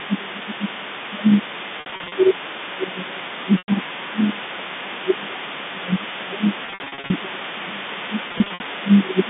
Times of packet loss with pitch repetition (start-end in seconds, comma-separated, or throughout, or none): 1.80-2.12, 3.58-3.68, 6.66-7.10, 8.28-8.60